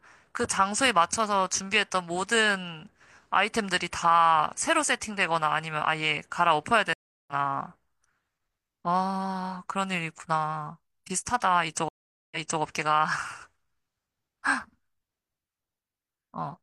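At 6.93 s the speech drops out for 344 ms, a stream reconnect. The player lost the connection and restarted decoding mid-stream. It resumes at 7.33 s about a third of a second later, skipping ahead. At 11.89 s a 429 ms gap follows, then resumes 299 ms earlier, replaying a stretch until 12.61 s.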